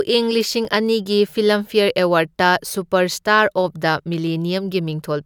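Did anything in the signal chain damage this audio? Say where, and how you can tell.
Yes, at the storage and playback stage. Between 0.41 and 1.13 s the speech has four CD scratch ticks, each brief, the longest about a millisecond and a half, spaced regularly. A scratch defeats error correction once per disc revolution, and the player interpolates or mutes the damaged samples.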